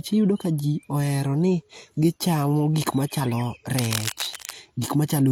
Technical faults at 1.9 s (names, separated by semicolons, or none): transcoding between lossy codecs